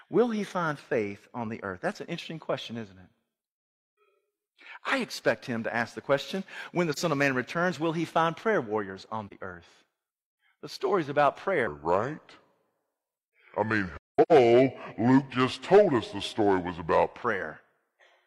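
Soft-edged dropouts break into the speech at 6.92 to 6.98 s and again at 9.27 to 9.33 s, just after "find prayer warriors on". Each fades out and back in, leaving a gap of about 43 ms, which fits a single lost frame. This is AAC frame loss with muting: the decoder zeroed the missing frame's spectrum, and the overlapping windows smoothed its edges into a brief hole.

From 11.67 s, right after "story's about", the speech turns deep and slow until 17.22 s. It runs at 0.751 times normal speed, pitching it down roughly five semitones. This is a section at the wrong speed, likely from the player or editor applying the wrong clock to that stretch.

Inside that slowed stretch, from 13.97 to 14.32 s, the same muted frame loss returns more heavily. Seven frames drop out, scattered over about 340 ms, and the longest gap is around 200 ms. The result is a choppy run of soft-edged holes rather than a single short one.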